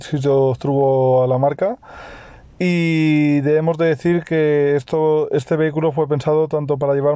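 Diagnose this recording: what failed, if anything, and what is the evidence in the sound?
Nothing in the recording points to a failure at any stage of the chain. No dropout, glitch or distortion marks any moment of it.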